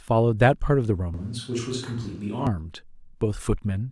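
Speech recording: from 1.14 to 2.47 s the voice abruptly turns roomy and thin, about 5 dB quieter and noisier, likely a switch to a distant microphone.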